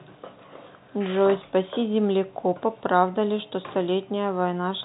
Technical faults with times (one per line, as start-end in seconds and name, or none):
none